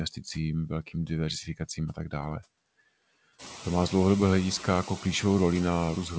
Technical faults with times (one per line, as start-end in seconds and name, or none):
0.00-6.18 noise suppressor artifacts